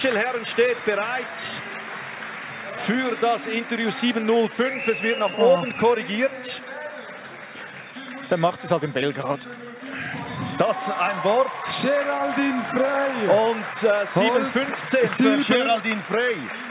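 No technical faults occur at any point in the clip, which carries the narrowband sound of a G.711 A-law call path with nothing above 4 kHz.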